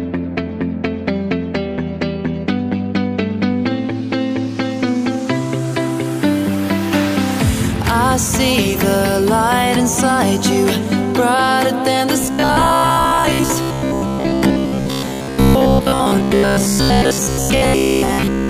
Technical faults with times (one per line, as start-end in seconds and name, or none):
12.21-18.49 robotic sound from repeated short buffers